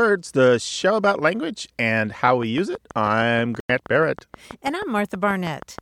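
Something, likely interference from nearby equipment or a faulty connection or power supply, began injecting pulses at 2.28 s, just after "show about language and". This train of clicks runs to 5.80 s as regular ticking at about 6.3 per second, roughly twenty clicks, peaking about 5 dB above the speech.

At 3.60 s, damaged bits made the decoder reject one compressed frame, and the player substituted silence. This corrupt frame muted fault leaves an abruptly starting hole lasting until 3.70 s, about 94 ms, which fits a single frame's length. Timing is preserved around it.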